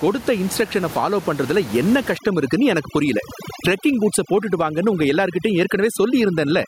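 Throughout the clip the level pumps, loud and soft parts squashed closer together, a gain swing of around 15 dB. This gain pumping, likely from input gain set far too high with a fast limiter pulling it back, differs from a noise gate because the level breathes smoothly rather than switching off.

From 2.17 s, right after "இன்ஸ்ட்ரக்ஷன ஃபாலோ பண்றதுல என்ன", to the end, overdone noise removal takes over. Individual frequency bands are cut whenever they resemble the noise estimate, so the room noise, which sat about 17 dB below the speech, drops and breaks up into twinkling specks. Pumping moves the whole level, but this fault strips bands selectively.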